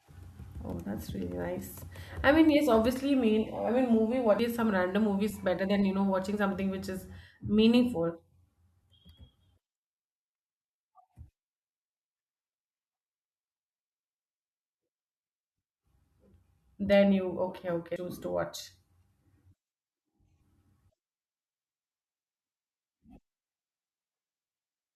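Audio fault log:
0.72 s, 4.39 s, 17.96 s: damaged data in a compressed stream. Corrupted bytes in the encoded stream make the decoder misread those frames, lose sync and hunt for the next valid frame header, so the speech breaks into a chirp, squawk, click or short hole at each point.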